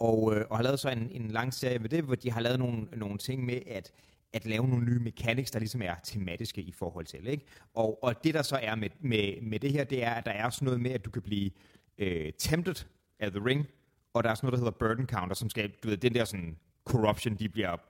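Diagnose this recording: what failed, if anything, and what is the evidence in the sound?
The failure is overlap-add ripple in a frame-based processing stage, such as call processing or another block that windows and resynthesises the signal. Across the whole speech clip the level pulses by about 6 dB at around 20 Hz, heard as a fast, rough tremolo that gives the speech a flutter. The analysis windows and hop size don't overlap to a constant sum, so the gain dips and recovers once per frame.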